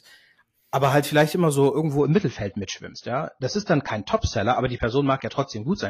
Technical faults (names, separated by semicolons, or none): adaptive stream at a lower bitrate